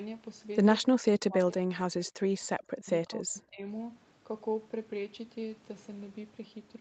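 A speech recording carried over a call. The talker's level collapses twice, from 0.92 to 2.9 s and again from 3.06 to 3.66 s. The first dip is very deep, around 40 dB, and the second is shallower, near 25 dB. The sound thins and drops out in pieces, about one and a half seconds in the first stretch and half a second in the second. This is likely speech suppressed in double talk, where the echo canceller cannot tell this talker from the far-end echo and turns both down.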